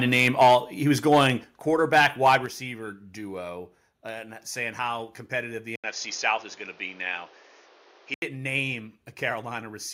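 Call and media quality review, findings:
Microphone overload, 0.13–0.55 s (ending just before "he was"), 1.12–1.24 s, 1.94–2.35 s: harsh crackle on peaks, likely input gain too high, driving the converter about 5–7 dB past full scale and flattening the waveform tops.

Microphone volume stepped down, 0.43 s (before "he was"), 1.44 s, 2.46 s (before "duo and saying how"): abrupt level drops of about 3, 6 and 6 dB, likely the call software's automatic input-gain control reacting to the clipping.

Input switched to a poorer device, 5.76–8.22 s: 80 ms gap, then dull band-limited sound, a new noise floor roughly 30 dB below the signal and a level change of about 5 dB, likely from an input-device change such as a headset call profile.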